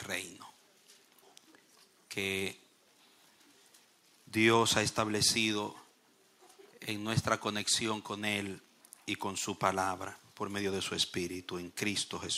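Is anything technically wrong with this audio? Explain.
No, nothing technically wrong turns up in this audio. No working path is listed to comment on, so there is nothing further to report.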